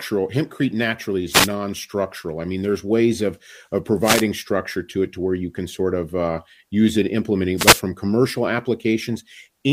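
Three wireless microphone noise hits break into this speech: 1.30 to 1.49 s, 4.02 to 4.24 s right after "there's ways of of", and 7.56 to 7.82 s just after "of uh use it". Each is a quick swish of static, about a fifth to a quarter of a second long. That's the analogue FM radio link fading as reflected signals cancel at the receiver, so receiver hiss surges up over the voice until the signal recovers.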